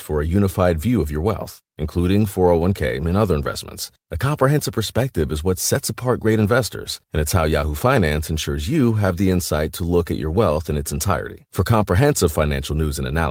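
Nothing goes wrong anywhere in this speech recording, so there's no technical fault to point to.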